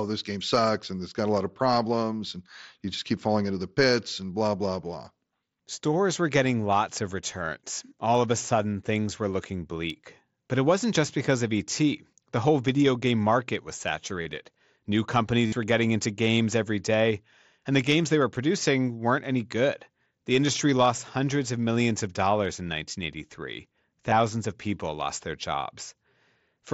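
Concealed Bluetooth headset packet loss hits three times: 14.23 to 14.26 s, 15.46 to 15.52 s, and 24.11 s. The receiver patches each gap by repeating a best-matching recent stretch of waveform, so the 60 ms run buzzes, then warbles as real audio returns.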